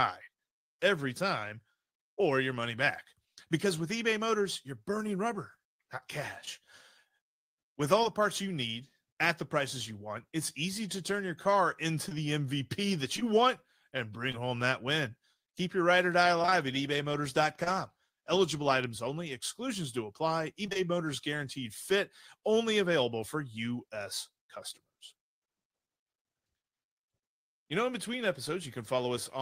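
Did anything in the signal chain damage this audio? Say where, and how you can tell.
Yes, damage happened in the network stage of the call path, where packets went missing and the receiver's concealment covered the holes.

Short concealed packet loss occurs at 8.03 to 8.07 s, just before "parts you need at", again at 14.32 to 14.35 s, and at 17.64 to 17.68 s. Each is a single lost packet worth about 20 ms of audio. The decoder bridged it by extending the preceding sound for roughly 13, 15 and 24 ms respectively before blending back into real audio. That produces a brief smear or wobble where a short sound can go missing.

Scattered short gaps run from 12.09 to 13.23 s, right after "turn your car into". Across that stretch of just over a second, about three isolated packets went missing, each around 20 ms, totalling 60 ms of lost audio. The receiver filled each hole by carrying the last sound forward. 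Only a small fraction of the span is patched, so the audio stays clear apart from a few separate hiccups spaced through it.

Repeated packet loss, giving a robotic sound, hits at 16.42 to 16.54 s and at 20.66 to 20.84 s, the second just after "only exclusions do apply". Each burst has three gaps, up to 21 ms each and 60 ms lost in total. Concealment covers about 50% and 44% of those short spans. The holes arrive so closely that each patch is soon followed by the next, giving choppy sound with pieces missing.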